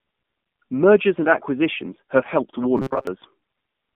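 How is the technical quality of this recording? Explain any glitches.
The technical quality is poor: the whole recording carries plain mobile-codec damage, and a short robotic glitch appears near the end.

Throughout, the speech has the sound of the AMR narrowband mobile codec. The phone-style band runs from about 150 Hz to 3.5 kHz, and the synthetic, buzzy texture fits AMR-NB at a low bitrate near 7.4 kbps. The codec rebuilds the voice from a vocal-tract model fed by sparse pulses, so detail is lost. On a spectrogram, nothing appears above 3.5 kHz, and the harmonics look smeared.

From 2.77 to 3.07 s, the voice turns into a rigid metallic buzz, with robotic sound from repeated short buffers as the likely cause. Audio arriving late would leave the software looping a tiny stretch of sound while the real audio is skipped. The buzz sits at 133 Hz, which fits a repeat of about 7.5 ms covering most of this stretch. 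A waveform would show identical short cycles repeating, and a spectrogram would show flat, evenly spaced harmonics at multiples of 133 Hz.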